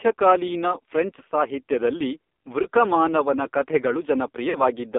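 AMR narrowband mobile codec, throughout: the speech is confined to roughly 250 Hz to 3.6 kHz and sounds heavily buzzy and synthetic, which points to a low bitrate near 6 kbps. Lost AMR speech frames occur at 2.62–2.65 s, just after "ಫ್ರೆಂಚ್ ಸಾಹಿತ್ಯದಲ್ಲಿ", where a brief warbling dip fits one missing 20 ms frame, and again at 4.50–4.63 s. There the decoder stretches the last good pitch and vocal-tract settings with falling gain, consistent with two lost frames, before the voice returns rough.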